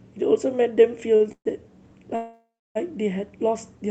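At 1.15 s there's a short stall from a late packet: the jitter buffer ran dry, so the receiver held the last sound for about 47 ms until the packet showed up. You hear a brief drawn-out bit with a faint buzz, and then the speech carries on with nothing lost.

Then come two call audio freezes, most likely packets held up in transit that emptied the buffer. The first runs 1.32 to 1.47 s, where the last sound trails off as a fading buzz and then about 80 ms of silence. The second is longer, from 2.15 to 2.77 s, with 600 ms filled in, about 280 ms of it silent. Each time the speech resumes right where it stopped, so a gap gets added rather than anything going missing.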